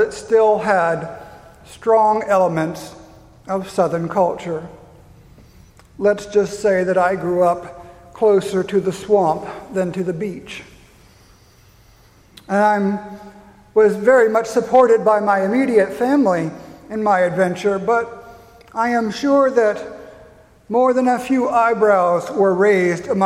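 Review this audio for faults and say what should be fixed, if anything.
No faults found; nothing needs fixing.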